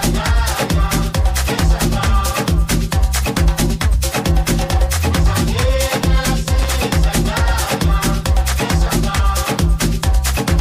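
At 6.62 s a brief burst of loose connector crackle runs for about 90 ms, to 6.71 s: a worn contact intermittently breaking the signal, heard as irregular scratching. The waveform shows jagged dropouts and spikes; the spectrogram shows scattered broadband vertical streaks.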